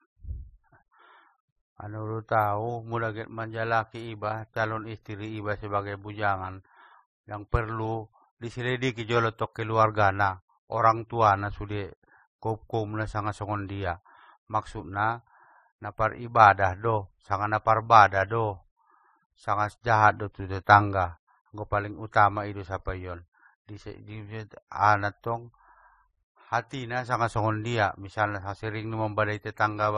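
Across the whole speech clip, nothing is heard above about 13.6 kHz, and the coding damage has two distinct textures at once: smeared, swirly high-frequency detail together with a second layer of warbling on top. That combination is what separates it from a single low-bitrate encode, which would have one consistent character. The likely cause is transcoding between lossy codecs, with a low-rate MP3 stage re-encoded as roughly 32 kbit/s AAC-LC that spends its bits reproducing the earlier artefacts.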